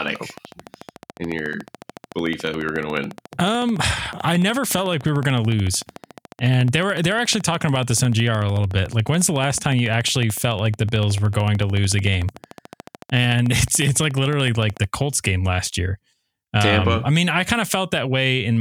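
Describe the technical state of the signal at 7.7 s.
At 7.7 s the signal sits inside a train of clicks that runs from 0.08 s to 14.85 s. Sharp, near-identical pulses arrive at a regular 13.8 per second, around two hundred in all, peaking about 5 dB above the speech. They read as a steady ticking laid over the talker and continuing through the pauses. The cause is likely interference coupling in from nearby equipment or a faulty connection or power supply.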